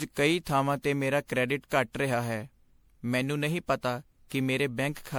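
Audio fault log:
Throughout: generation loss. The speech sounds swirly, hollow and smeared, with blurred consonant attacks, likely from repeated MP3 re-encoding, around seven passes, which fits a 96 kbit/s chain. A spectrogram shows patchy spectral holes and smeared onsets, with nothing above 20.8 kHz.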